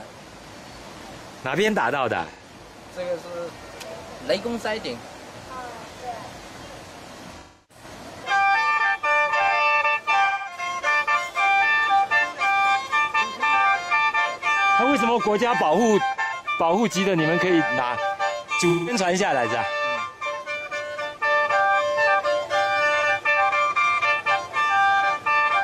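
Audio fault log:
2.31–2.42 s, 7.39–7.84 s, 10.25–10.57 s, 16.22–16.33 s, 18.69–18.93 s, AAC frame loss with concealment: The gaps last 85 to 300 ms. Each fits two to seven missing AAC frames. The decoder rebuilds them from the last good spectrum with scrambled signs or interpolated energy.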